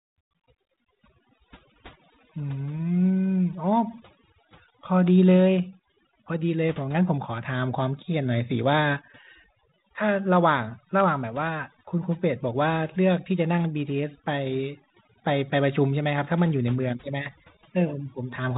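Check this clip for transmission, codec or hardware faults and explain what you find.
There's one real problem, and it runs through the whole speech clip: overdone noise removal. A noise reducer set far too hard is pulling individual frequency bands down or out whenever they sit near its noise estimate, taking quieter parts of the voice along with the noise. The gaps drop and break up into little twinkling specks. Underneath that, the telephone-band coding with nothing above 3.8 kHz and only light grain fits G.726 ADPCM at 32 kbit/s.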